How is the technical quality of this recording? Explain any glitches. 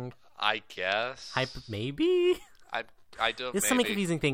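No glitches are audible anywhere in this speech recording, so there is nothing to explain.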